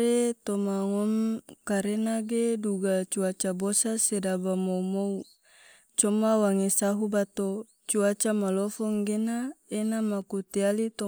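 No technical faults can be heard anywhere in the speech recording; the signal stays continuous and stable throughout.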